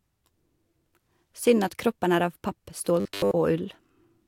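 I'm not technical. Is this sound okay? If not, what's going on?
No. From 3.00 to 3.31 s the speech becomes a rigid metallic buzz, robotic sound from repeated short buffers, likely a tiny snippet replayed over most of the real audio.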